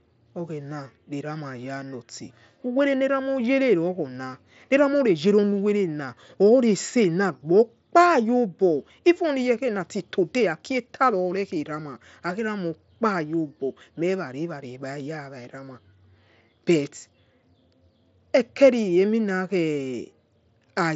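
No technical faults are audible.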